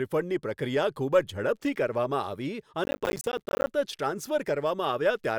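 From 2.84 to 3.67 s a gritty burst of crackle tears across the speech, a rapid run of tiny dropouts with hard edges that stops as abruptly as it starts. This is processor overload crackle. The processor fell behind and missed its deadline for dozens of short audio buffers over that stretch, each miss leaving a brief hole of silence. The spacing of the clicks fits buffers of around 10 ms.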